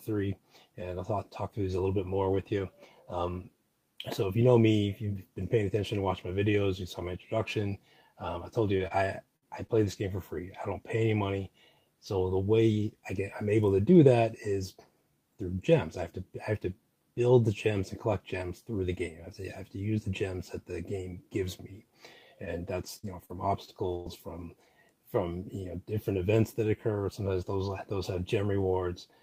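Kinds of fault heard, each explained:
Repeated packet loss (robotic sound): choppy patches from 8.77 to 9.94 s and from 22.45 to 24.19 s, with dropouts up to 55 ms and 100 ms. Packets kept going missing or arriving late, and each hole was filled by extending the previous sound.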